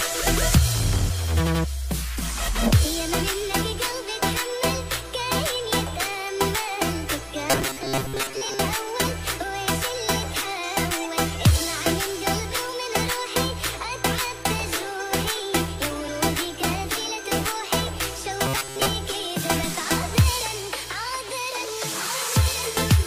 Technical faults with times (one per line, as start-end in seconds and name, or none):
7.51-8.59 robotic sound from repeated short buffers
18.46-18.87 robotic sound from repeated short buffers